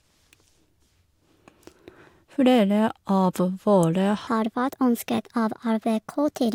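At 4.27 s the speech jumps into a section at the wrong speed. It plays 1.28 times too fast until the end, at 6.55 s. Pitch rises about four semitones with it. The likely cause is playback against a mismatched clock.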